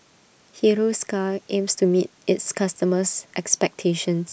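No technical faults can be heard anywhere in the recording.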